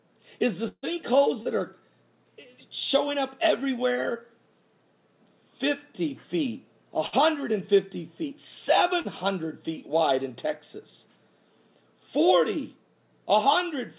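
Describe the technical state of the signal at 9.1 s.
A brief smear, a momentary wobble, sits just before 9.1 s, spanning 9.01 to 9.08 s. This is short concealed packet loss: about 30 ms of the call arrived too late to decode, and the receiver papered over the gap by extending the preceding sound for roughly 35 ms before blending back into the real signal. The surrounding audio is band-limited to 4 kHz by the G.711 call codec.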